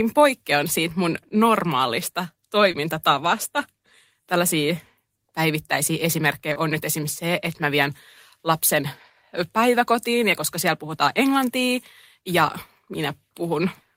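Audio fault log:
2.71–2.75 s and 6.53–6.57 s: short concealed packet loss. About 20 ms of the call arrived too late each time, and the receiver filled the gap by extending the preceding sound before blending back. The result is a brief smear rather than a silent dropout or a sharp click.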